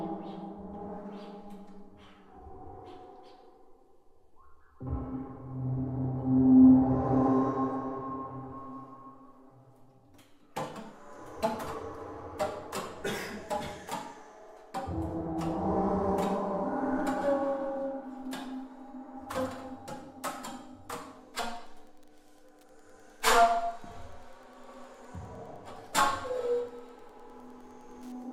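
From 21.48 s to the end, Wi-Fi interference appears as steady ticking about ten times a second, around 45 dB below the sound. A nearby radio's 102.4 ms beacon is rectified by the audio circuit, showing as evenly spaced thin vertical lines on a spectrogram and small regular spikes in the waveform.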